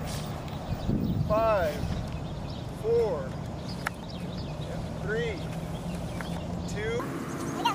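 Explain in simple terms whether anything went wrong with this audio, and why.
From 7.00 s to 7.75 s there's a section at the wrong speed: it plays nearly twice as fast and much higher, likely from a mismatched playback clock.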